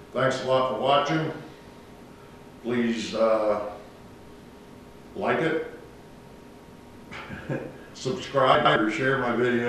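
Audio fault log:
8.55–8.76 s frames out of order: two neighbouring blocks of about 105 ms were decoded in swapped order, so the stretch flutters.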